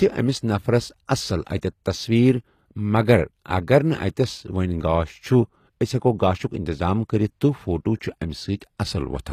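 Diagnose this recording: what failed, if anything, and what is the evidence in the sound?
Codec stage, likely HE-AAC compression at a low bitrate around 24 kbps: throughout, the treble sounds synthesized and stops near 14.9 kHz, and the s sounds come out gritty and lispy.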